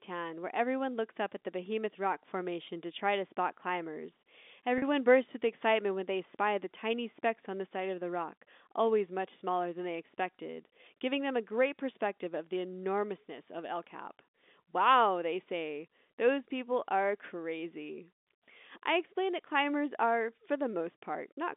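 From 4.78 to 4.82 s the speech holds a buzzy tone: packet loss with pitch repetition, a 40 ms gap filled by looping the last pitch period.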